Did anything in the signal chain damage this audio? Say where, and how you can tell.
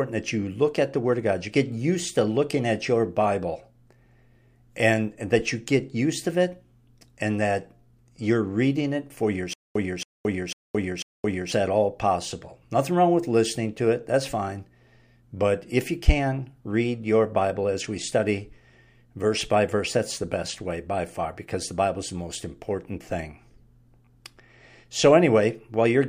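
Yes. From 9.53 to 11.52 s there is a stutter with silent gaps: a 276 ms burst repeats four times, each followed by 220 ms of digital silence, a steady 496 ms cycle. The likely cause is a stalled playback buffer retrying. Its true silences distinguish it from a plain loop glitch, and the audio between is lost.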